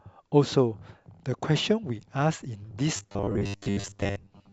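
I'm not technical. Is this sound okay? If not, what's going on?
No. From 2.97 to 4.52 s the speech turns into a stiff, metallic buzz. This is robotic sound from repeated short buffers: tiny 10 ms scraps are likely replayed over and over because new audio arrived late.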